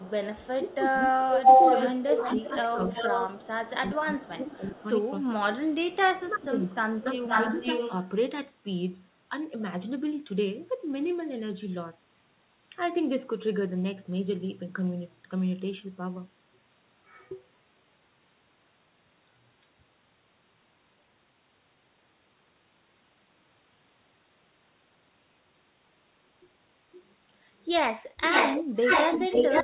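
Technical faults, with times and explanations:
0.00–3.42 s, 4.21–5.09 s and 5.66–7.92 s, echo leak: a delayed copy of the speech trails the talker by 352 ms. It sits about 5 dB above the speech at first, drops to about 20 dB below, then returns at about 5 dB below. This is likely a far-end loudspeaker echo the canceller failed to remove.
0.54–5.58 s and 6.21–7.55 s, speech suppressed in double talk: while the echo overlaps the talker, the speech dips by up to about 20 dB and breaks up for roughly three seconds, then for under a second. This is likely the canceller ducking everything when it cannot tell the talker from echo.
28.23–29.63 s, echo leak: the echo returns at the end, now 512 ms behind and about 5 dB louder than the speech, heard within the narrowband call audio that has nothing above 4 kHz. This is likely loudspeaker echo the canceller again failed to remove.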